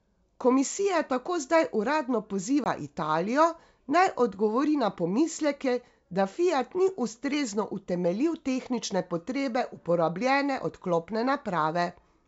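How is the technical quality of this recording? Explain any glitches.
There is one audible glitch in the wideband G.722 speech. It is packet loss on an ADPCM call, from 2.64 to 2.67 s, just after "tako zdaj uradno". About one packet, 20 ms, drops to hard-edged silence, and the decoder's predictor falls out of step with the sender's. Unlike a simple dropout, the speech returns slightly distorted before settling.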